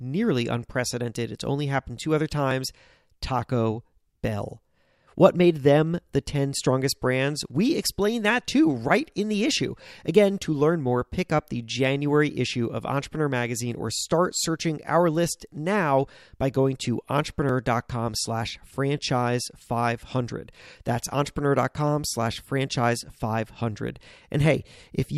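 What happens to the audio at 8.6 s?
Nothing goes wrong at 8.6 s; the speech runs through that moment intact, with no dropout, click, glitch or other fault.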